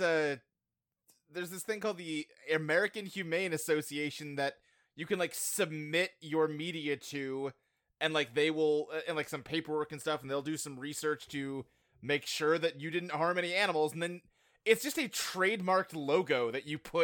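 Video or display buzz appears from 9.82 to 11.82 s, after "uh and like some" and before "make sure that you". A screen or video cable coupling into the audio path leaves a faint 60 Hz buzz at the picture's field rate, with a thin hash riding above it.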